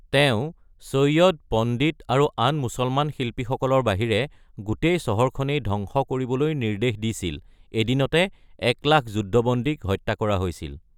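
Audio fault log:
No faults heard.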